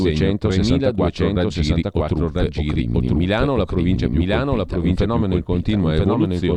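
From the start and through the whole speech clip, a doubled audio track is heard: a second full-band copy trails the first by about a second, at roughly the same loudness, with no reverberant tail or room colour. This is likely a slower second capture path or a misaligned edit mixing the same audio in twice. On a waveform and spectrogram, every burst of energy reappears intact about a second later, stacked over the continuing signal.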